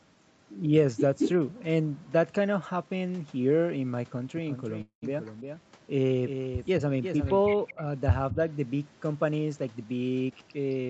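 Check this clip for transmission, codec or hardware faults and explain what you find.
Five kinds of fault appear in this speech, all consistent with a call path that, like the 8 kHz top end, fits Opus.

Echo leak at 1.18–1.3 s, 5.26–5.33 s, 7.53–7.74 s and 8.31–8.35 s: a copy 220 ms late, likely from incomplete echo cancellation, from about equal level down to about 30 dB below.

Doubled audio track from 4.37 to 7.41 s: a full-band copy about 10 dB quieter trails by around 400 ms, likely a second capture path, dry and abruptly bounded.

Call audio freeze at 4.81–5.04 s: 208 ms is filled, ending in about 100 ms of silence, likely a jitter buffer underrun. Speech then resumes with nothing lost.

Speech suppressed in double talk at 8.33–8.38 s: the talker dips about 5 dB for roughly 50 ms, likely the echo canceller attenuating during overlapping talk.

Jitter buffer speed-up from 10.25 to 10.87 s: pitch-period pieces totalling roughly 150 ms are removed, so speech runs at 122% speed at unchanged pitch and sounds hurried.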